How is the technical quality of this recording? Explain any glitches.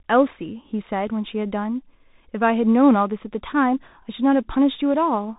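The quality is poor throughout because of the Bluetooth CVSD headset codec. Each sample is one bit, up or down, with an adapting step, which fits a 64 kbps link. Nothing above 3.8 kHz passes, so the speech sounds narrow. S sounds turn scratchy over a grainy hiss.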